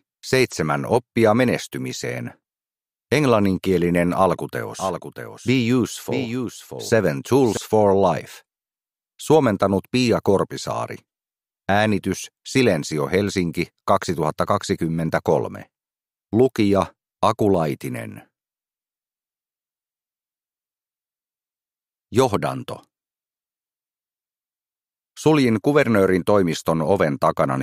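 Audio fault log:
4.79–7.57 s, doubled audio track: a second, full-band copy of the sound runs about 0.7 s behind the original and roughly 5 dB quieter, switching on and off abruptly at the range edges. It is most likely a second capture through a slower path, or an edit holding two copies out of step. Unlike an echo or room reflection, there is a single copy with no decay, no repeating tail and no added room colour.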